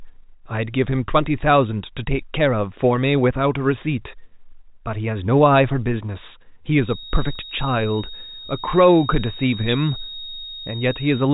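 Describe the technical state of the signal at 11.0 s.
A thin, steady whistle near 3.7 kHz sits behind the speech at 11.0 s, wavering slightly in level and staying well below the voice. It is a feedback whistle that begins at 6.77 s and lasts to the end of the clip. The likely cause is a loudspeaker-to-microphone loop held right at the edge of feedback, so one frequency keeps ringing without building up. The tone sits just under the 4 kHz ceiling of the telephone-band coding.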